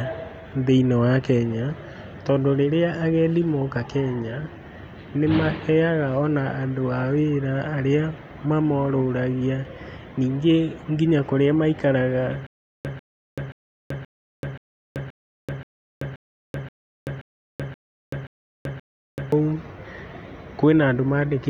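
Speech, with a stutter with silent gaps from 12.47 to 19.32 s, just after "ningĩ nginya kũrĩa maikaraga". A 144 ms burst recurs 13 times every 528 ms with about 383 ms of digital silence between, likely a stalled stream replaying its last fragment. Unlike a dropout, the same fragment keeps returning.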